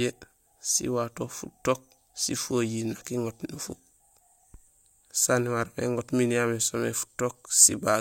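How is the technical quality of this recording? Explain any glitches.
No technical glitches can be heard anywhere here.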